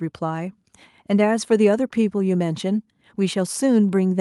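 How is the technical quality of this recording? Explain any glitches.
No audible glitches or technical faults anywhere in the speech recording; nothing to flag.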